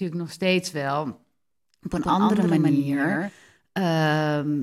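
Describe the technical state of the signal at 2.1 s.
At 2.1 s the signal carries a doubled audio track, running from 1.98 to 3.30 s, most likely because a second, slower capture path is mixed in. The speech is repeated about 150 ms late at about 5 dB quieter, a dry echo that appears and cuts off abruptly.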